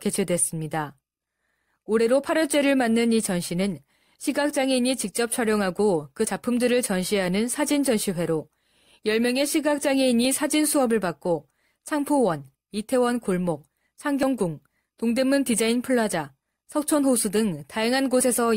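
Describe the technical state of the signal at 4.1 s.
At 4.1 s the speech signal is intact, with no audible fault at that moment.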